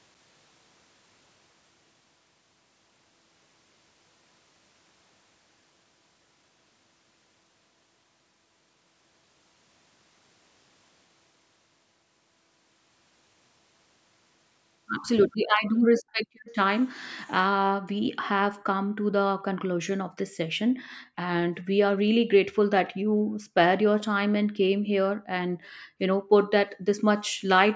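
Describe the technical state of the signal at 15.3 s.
From 15.31 to 15.37 s, a very faint, delayed copy of the speech surfaces: an echo leak, likely from a loudspeaker's echo canceller letting some of its microphone pickup through, about 428 ms late. On a spectrogram it shows as a dim, smeared repeat of earlier harmonics; the waveform barely changes.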